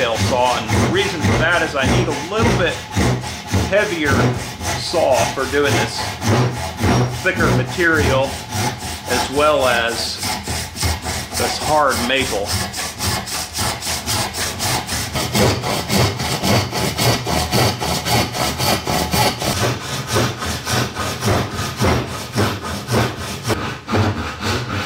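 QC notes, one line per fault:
No faults to log.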